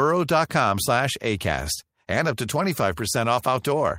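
Nothing technical goes wrong anywhere in this bit of speech, so there's no fault to point to at any moment.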